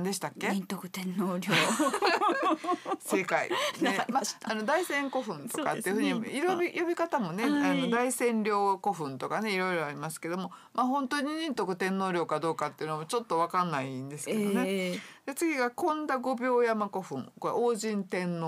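Nothing here sounds wrong at all, so there's no technical fault to point to anywhere in the audio.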